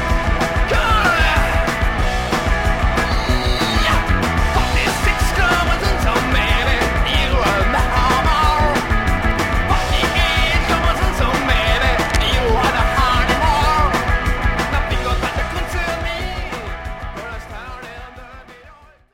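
The audio carries one brief fault: cable scratch noise from 12.01 to 12.16 s. A dense, uneven burst of scratching rustle sits over the sound for about 0.15 s, roughly 10 dB below it. The likely cause is a worn cable or connector being moved.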